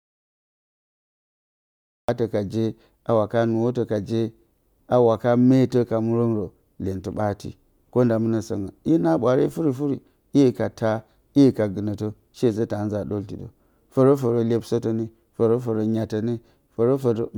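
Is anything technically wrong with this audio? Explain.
Yes. From the very start until 2.09 s the speech clip sits in an audio dropout to silence, already under way when the audio begins. The input was likely lost through a disconnected device, failed link or mute while the recorder kept writing silence. There is total silence with no room tone, then speech cuts in mid-flow. The waveform is a flat line and the spectrogram is blank until that point.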